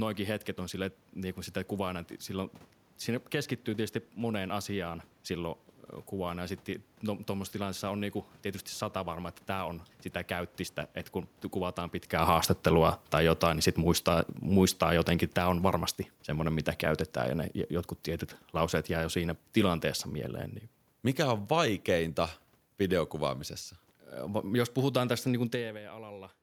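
From 12.11 to 19.91 s, just after "käyttistä että kun kuvataan", automatic gain falling: the gain control judges the input too loud or its background noise too strong and eases it down by about 9 dB, with the background sinking along.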